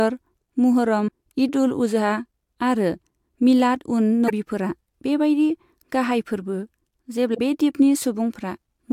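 Speech with three short bursts of damaged data in a compressed stream, at 1.05–1.09 s, 4.26–4.31 s and 7.31–7.39 s. Corrupted bytes make the decoder misread frames and hunt for sync, causing brief glitches that appear as abrupt spectral and waveform discontinuities.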